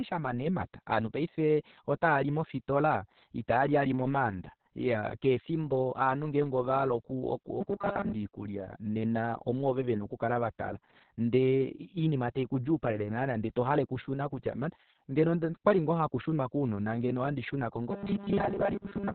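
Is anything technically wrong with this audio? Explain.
Yes. Two faults are audible.

Throughout, Opus voice compression in its SILK speech mode narrows the band, leaving nothing above about 4.4 kHz, and codes the speech coarsely. The result is steady muffled, hoarse, slightly robotic speech, consistent with a bitrate near 6 kbps.

From 7.61 to 8.13 s, just before "oikulya nena omwoove vena", and from 17.91 s to the end, there is robotic sound from repeated short buffers. The speech collapses into a rigid metallic buzz at 200 Hz, most likely from a roughly 5 ms chunk being replayed over most of each stretch. Unlike the codec's constant dullness, this buzz holds a fixed pitch and comes in bursts.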